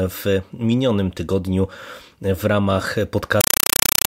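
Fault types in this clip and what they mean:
Compressed stream played as audio: from 3.41 s, after "minionym tygodniu w ramach", undecoded AC-3 data replaces the speech with loud static bursts 31 times a second.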